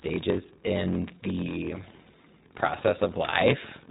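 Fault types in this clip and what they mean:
block size mismatch (padded): Each block is written shorter than it is read, and the remainder is filled with silence. That repeated gap makes a steady buzz at about 43.1 Hz, which fits a 1024-sample read block. The speech runs at 0.938 times normal speed, yet keeps roughly its natural pitch.
iLBC codec: This narrowband voice codec codes each 20 ms frame independently. Nothing above 3.8 kHz survives, so the speech sounds muffled and telephone-like. The coding damage is plainly audible as a rough, synthetic edge, which fits the 15.2 kbps mode.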